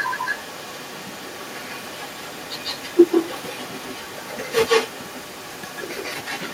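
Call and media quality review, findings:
Echo with no canceller, whole clip, speech. Every phrase trailed by a fainter, thinner copy, roughly 150 ms late, sitting about 8 dB under the direct speech. Probable component: far-end device on loudspeaker with no working AEC. Mechanism: far mic picks up its own speaker playback and ships it straight back, so the talker's audio returns after the network round trip. Worth checking that device's echo cancellation settings first.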